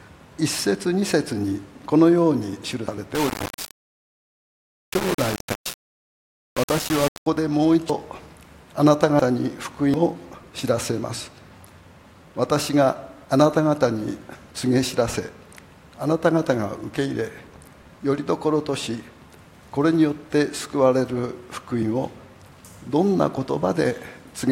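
At 2.88 s the sound jumps forward. About a tenth of a second is missing, and the two sides butt together with no gap. This is likely a dropped buffer (overrun): the hardware overwrote samples before the program read them. The same skip returns at 7.90 s, 9.20 s, 9.94 s and 21.83 s. The jumps at 7.90 s and 9.94 s lose about a fifth of a second each.

From 3.15 s to 7.26 s the sound turns coarse and grainy. The grit moves with the signal, and quiet passages turn gritty. The cause is likely low bit depth without dither. The audio sits on just 4 bits, rounded to the nearest step with no dither. The resulting error is loud, about 10 dB below the signal itself.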